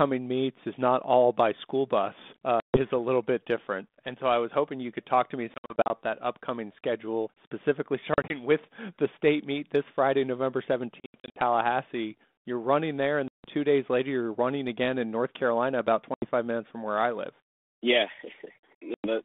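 Packet loss on an ADPCM call breaks the speech at 2.6 to 2.79 s, 5.54 to 5.9 s, 8.14 to 8.36 s, 11.0 to 11.41 s, 13.28 to 13.48 s, 16.14 to 16.26 s and 18.94 to 19.08 s. Each is a hard-edged silent hole, some split into short bursts. Unlike a concealed dropout, the 32 kbit/s G.726 decoder's predictor and step size lose sync, so speech resumes with brief, slight distortion before settling.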